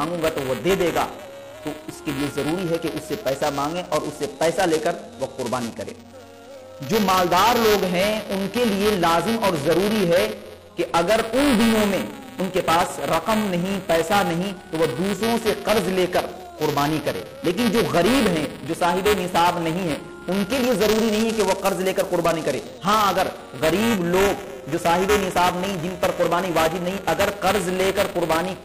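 Throughout the clip, the writer and reader of the playback ring buffer have drifted out of step, causing buffer tearing. A small slice of each period repeats audio a few milliseconds stale, with a 345 Hz buzz that fits a 128-sample buffer, riding on the sound whenever signal is present.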